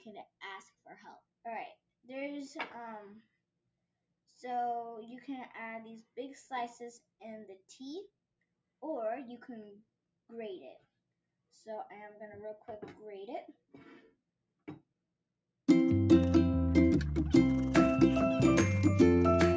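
No technical faults are audible.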